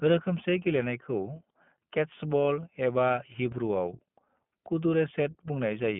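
From start to finish the speech sounds boxed-in and slightly rough, with a buzzy, synthetic edge that is plainly audible. Nothing is heard below about 150 Hz or above 3.4 kHz, so sibilants lose their crispness. This is the iLBC codec at work: each 20 ms frame's excitation is coded independently of the previous frame, which trades smoothness for robustness, and the roughness fits its 15.2 kbps mode.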